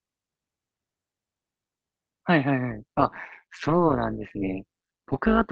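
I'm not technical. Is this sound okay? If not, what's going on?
No. From about 2.71 s to the end, the speech picks up an overlap-add ripple. The audio was chopped into short overlapping slices and stitched back together, but the overlaps don't add up to a steady level, so the loudness pulses with every slice, roughly 150 times a second. That fast, deep pulsing gives the voice a metallic buzz with extra tones around it. The call link the audio passed through isn't the source.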